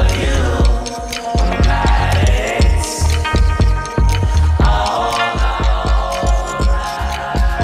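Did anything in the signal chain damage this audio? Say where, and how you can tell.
Yes. From 5.3 s to the end, the sound turns rough and doubled: channel delay (comb filtering) at mono summing, one channel about 20 ms late, notches from around 30 Hz.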